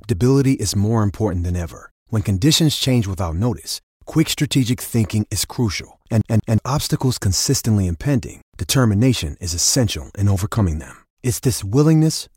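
A CD stuck on one turn occurs from 6.21 to 6.58 s: a scratch throws the laser back a track, so a 184 ms slice of speech plays twice, each jump marked by a brief mute, giving the quick, even stutter of a skipping disc.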